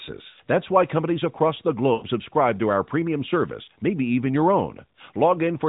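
Lost AMR speech frames at 0.30 to 0.40 s, 1.94 to 2.04 s and 3.64 to 3.68 s: the decoder rebuilt missing 80, 80 and 40 ms stretches from the last good pitch and vocal tract settings with falling gain, so speech smears and fades briefly before returning rough for a moment.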